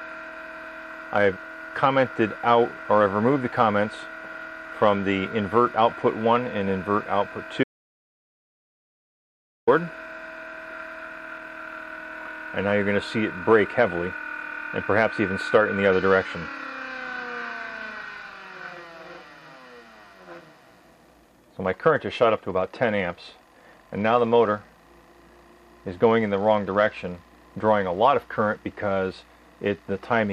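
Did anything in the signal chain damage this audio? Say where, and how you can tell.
Yes: an audio dropout to silence from 7.64 to 9.67 s, likely a lost input link. The gap is silent with no room tone, unlike a noise gate closing.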